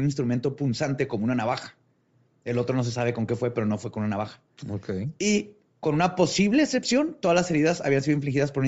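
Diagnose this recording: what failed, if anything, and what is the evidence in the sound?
The codec stage is the likely culprit. Throughout the speech, the upper spectrum sounds thinned and patched with noise. The voice takes on a breathy, grainy edge. That fits Bluetooth LC3 compression at a low rate, around 32 kbps with 7.5 ms frames. At that rate the transform coder drops many high-frequency coefficients. It then fills the gaps with shaped noise. The damage is plainly audible across the whole clip.

The transmission link dropped one LE Audio frame at 6.34 s, between "con una" and "excepción todas las". The gap lasts about 7.5 ms, a single LC3 frame. You hear a brief rough blur rather than a click or a silent hole. The decoder covered the gap by replaying the previous frame's spectrum with randomised signs. That turns the tonal voice content into a momentary noisy smear. The loss was too short to fade toward silence.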